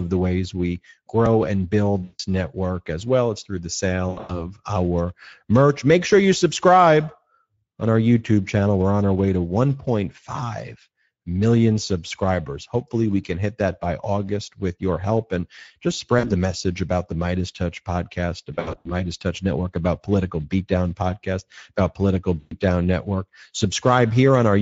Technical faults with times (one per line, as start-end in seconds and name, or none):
0.00-24.61 Speex codec
2.03-2.21 VoIP packet loss concealed by the speech codec
4.09-4.53 VoIP packet loss concealed by the speech codec
16.19-16.31 VoIP packet loss concealed by the speech codec
18.53-18.92 VoIP packet loss concealed by the speech codec
22.39-22.54 VoIP packet loss concealed by the speech codec